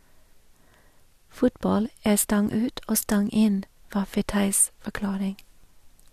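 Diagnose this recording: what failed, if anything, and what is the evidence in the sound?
A segment overlap in the streaming stage (network/playback) is heard as a tiny skip at 5.64 s in this speech. Two 2.0-second segments claimed the same stretch of time, so the player discarded sound that wasn't actually duplicated. On the waveform this appears as a sudden discontinuity, and on the spectrogram as a thin vertical broadband line.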